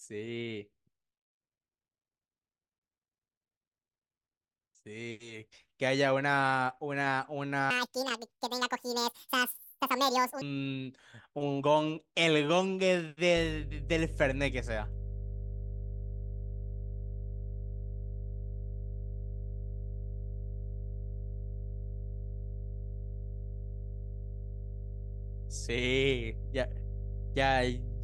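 At 7.70 s there's a section at the wrong speed that runs until 10.42 s. The speech suddenly plays about 1.84 times faster, and because speed and pitch move together, it jumps up by roughly ten semitones, so the talker sounds squeaky and rushed, almost cartoonish, before snapping back to normal. That kind of jump is likely a stretch of audio played or resampled against the wrong clock, so it got sped up in place.

From 13.37 s to the end there's mains hum. It's a steady low 50 Hz drone, the kind you get when a ground loop or a nearby transformer leaks the power line into the signal path. It's loud, sitting only a few dB below the speech, so you hear it constantly under everything, humming away in the gaps and muddying the low end even while someone's talking.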